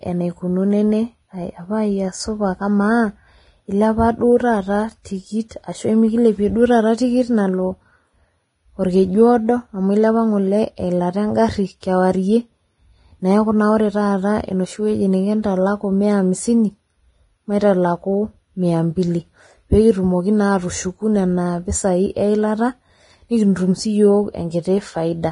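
Throughout the speech, nothing is heard above about 10.6 kHz. The treble is hissy and grainy, attacks are smeared, and tones sound rough. This is likely heavy Vorbis compression, which fits a bitrate near 28 kbps. Fine high detail was quantised into noise.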